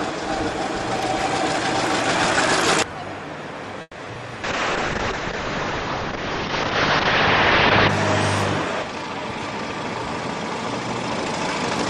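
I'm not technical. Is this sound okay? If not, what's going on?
No, there are a few glitches close together. At 3.81 s the sound briefly hangs and turns into a fading buzz for about 0.16 s, then carries on from where it stopped. That's a call audio freeze, likely from packets getting held up on the network so the receiving end ran out of audio and stretched the last bit.

Right after, at 4.05 to 4.08 s and again at 4.14 to 4.17 s, there are two tiny smears or wobbles. These are short concealed packet losses: small chunks never arrived, and the receiver papered over each gap by continuing the sound just before it.

From 4.45 s to 7.95 s the sound goes rough and muffled, with the top end capped at around 8 kHz. That's a call bitrate drop: the connection's estimated capacity fell, so the encoder squeezed the audio much harder until things recovered.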